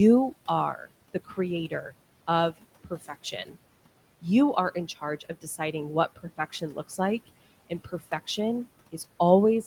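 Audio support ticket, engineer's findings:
Speech cut by the noise suppressor at 0.74–0.89 s, 1.14–1.38 s, 2.84–3.56 s, 5.2–5.74 s, 6.16–6.99 s and 7.7–8.38 s. Speech dips by about 12 to 15 dB, each time for a short stretch. Probable component: noise suppressor. Mechanism: quieter parts of the speech classified as noise and turned down along with the room noise, which sits about 21 dB below the speech. Result is faint, swallowed sound.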